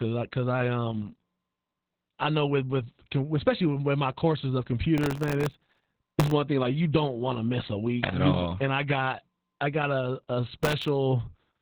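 From the start the speech carries Opus voice compression, squeezed to narrowband around 4 kHz at what sounds like roughly 8 kbps, so it comes out muffled, hoarse and a bit robotic. From 4.98 to 6.32 s, after "with my courses of" and up to "thing like you don't", there's processor overload crackle. Tiny sub-millisecond buffers keep missing their deadlines and replaying stale audio, which makes a gritty tearing. It returns briefly at 10.63 to 10.88 s, after "I got a a".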